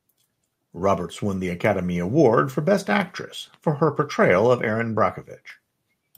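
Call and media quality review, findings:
Nothing to flag here; the speech comes through without any audible faults, so there's nothing for this ticket.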